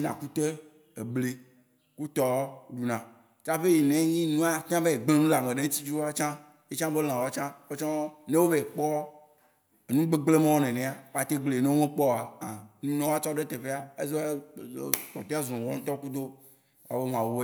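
A speech recording with nothing technically wrong with it.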